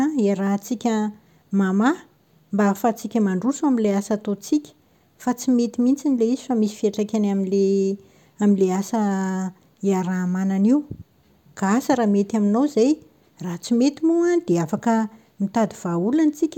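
No technical faults are audible.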